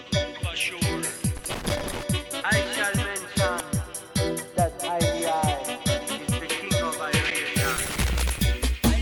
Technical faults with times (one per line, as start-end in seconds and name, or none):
1.37-2.03 loose connector crackle
3.60 damaged data in a compressed stream
7.28-7.31 damaged data in a compressed stream
7.76-8.39 loose connector crackle